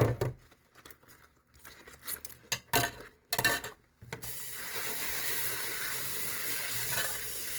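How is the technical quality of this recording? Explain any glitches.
Technical quality suffers from plainly audible Opus compression throughout. Tones turn grainy, rough and noisy, likely from the encoder filling starved bands with noise, which fits roughly 24 kbps.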